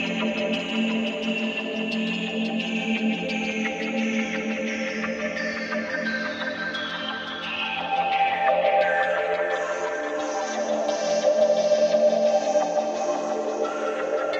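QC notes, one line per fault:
No audible faults detected.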